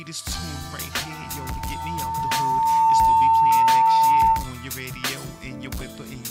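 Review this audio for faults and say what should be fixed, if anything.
A single steady tone near 902 Hz appears at 0.92 s, swells over roughly two seconds into a piercing squeal, and holds until it stops at 4.52 s, ending up around 15 dB louder than the surrounding sound. This is loudspeaker feedback squeal: the microphone is picking up the loudspeaker it feeds, and at about 902 Hz the loop gain rises above one, so that frequency keeps reinforcing itself. To prevent it, lower the gain, move the microphone away from or behind the loudspeaker, or notch out the ringing frequency near 902 Hz.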